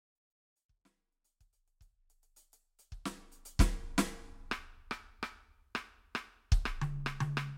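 No technical faults are audible in this music clip.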